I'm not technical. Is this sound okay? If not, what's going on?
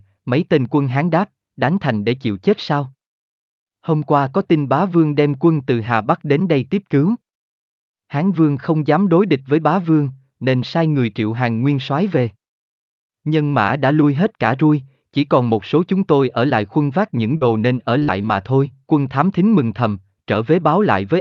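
No. Around 17.37 to 17.43 s, right after "lại khuân vác những", then at 17.99 s after "nên ở" and at 18.22 s before "thôi quân thám thính", the speech briefly smears or wobbles. This is short concealed packet loss: slices of 20 to 40 ms arrived too late, and the receiver patched each by stretching the preceding sound.

From 18.03 to 18.10 s the sound becomes a brief held buzz or fading hiss, then jumps ahead. This is a burst of packet loss: several pieces in a row, about 40 ms of real audio, went missing, and the receiver filled the gap by continuing the last sound.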